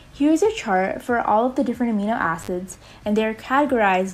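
An intermittent contact fault interrupts the audio between 2.42 and 2.48 s. A loose plug or cable connection opens briefly, so the sound drops out for about 42 ms. Crackle marks both edges of the gap, and faint hiss remains while the line is open.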